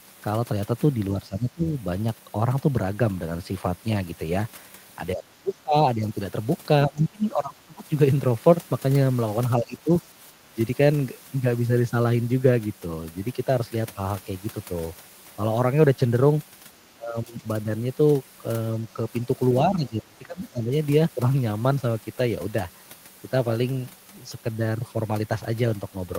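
Speech suppressed in double talk occurs at 1.21–1.73, 5.15–6.06, 6.86–7.9, 9.57–9.89, 10.53–10.58, 16.94–17.44 and 19.68–20.71 s. The speech dips by about 10 to 30 dB, deepest near 7 s, likely because an echo canceller attenuated the talker during overlapping speech.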